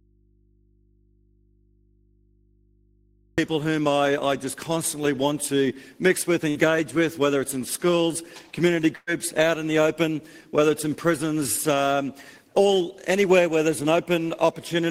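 From the very first moment until 3.38 s the audio is missing and only a low mains hum remains, about 40 dB below the normal level. Then the sound cuts in abruptly rather than fading up. This is an audio dropout to a faint residue. The likely cause is a lost signal feed while the input stayed live, so the open input picked up hum for that stretch. Later come two short bursts of packet loss. From 6.49 to 6.58 s the last sound is stretched into a fading held tone or hiss for about 60 ms. From 8.95 to 9.10 s the fill runs longer, about 120 ms, and ends in roughly 20 ms of silence. In both places the receiver had no data, so it extended and faded what it last played. When audio resumes, the material that should have filled those gaps is simply gone.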